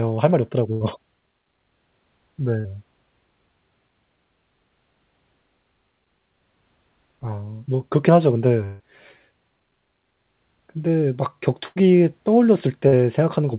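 Speech, carried over a call link with nothing above 4 kHz, which fits narrowband G.711 mu-law at 64 kbps. There are three bursts of packet loss, at 0.72 s, 11.68 s and 12.88 s. At each one the receiver keeps the last sound going and lets it fade, giving a held buzz or a dying hiss. The first two fill about 80 ms each. The third is shorter, about 45 ms. In every case the speech resumes further on, with the covered stretch simply gone. At 2.60 s there is a short concealed packet loss. About 40 ms never arrived. The gap is patched by extending the prior sound and blending back in. It passes as a brief smear or wobble rather than a clear break. At 8.64 to 8.83 s the fill runs for about 155 ms, and roughly 160 ms of speech is lost. The sound is stretched into a fading buzz or hiss that never drops to silence before the speech returns. That length points to a long network dropout as the likely cause.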